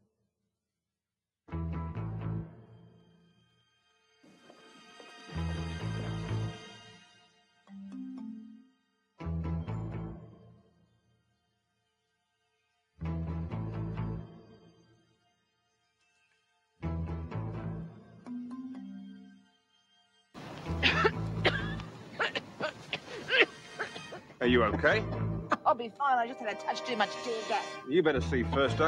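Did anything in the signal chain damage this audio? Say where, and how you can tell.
Yes. The call-processing stage's noise suppressor cut sound at 7.02–7.70, 8.65–9.00, 10.63–11.19, 14.92–15.45 and 19.44–20.35 s, pulling it down by about 10–12 dB. On a spectrogram these spans show faded energy and clipped decay tails, and the waveform envelope visibly sags.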